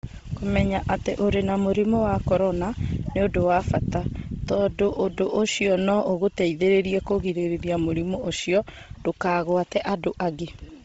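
From start to finish, the speech has most likely passed through Bluetooth LC3 compression, squeezed hard enough that its upper spectrum was discarded and patched with synthetic noise. Nothing survives above about 7.8 kHz, so the top end stops abruptly. What remains carries a breathy, grainy edge, with heavy codec damage. That degree of loss fits a low bitrate near 24 kbps working in short 7.5 ms frames.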